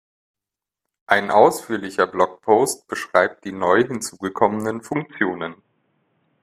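From 4.93 s onward the speech turns boxy, with nothing above 3.8 kHz and faint new background noise; likely the input switched to a poorer device.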